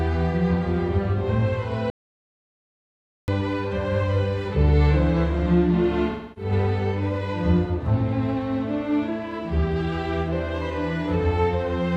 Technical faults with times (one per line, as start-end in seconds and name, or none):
1.90-3.28 audio dropout to silence
6.11-6.52 AAC frame loss with concealment